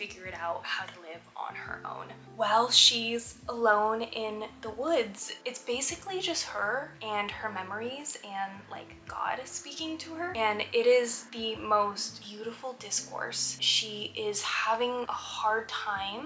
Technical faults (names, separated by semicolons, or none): none